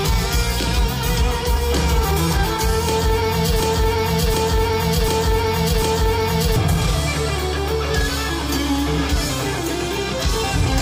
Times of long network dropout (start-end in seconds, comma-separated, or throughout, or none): none